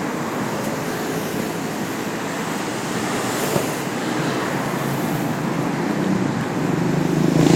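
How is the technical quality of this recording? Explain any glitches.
The recording carries a recurring dropout fault. Periodic USB or driver dropouts run from 0.16 s to 7.41 s, repeating every 0.25 s for roughly thirty events. Each time, a background task stalls the USB bus or audio driver and a tiny slice of audio, around half a millisecond, is lost and filled with silence. These gaps are heard as an evenly spaced ticking, four per second, audible only while sound is present.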